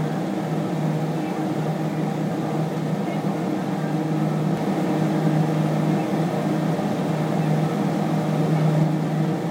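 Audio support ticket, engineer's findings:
Doubled audio track, 4.57 s to 8.83 s. Full-band copy of the sound trails the original by about 1.5 s at roughly equal level, with no decay or room colour; abrupt onset and cut-off. Likely cause: second capture path or out-of-step edit mixing a delayed duplicate. Waveform: each transient repeated about 1.5 s later at matching amplitude. Spectrogram: identical spectral pattern shifted right, hard vertical edges at both ends.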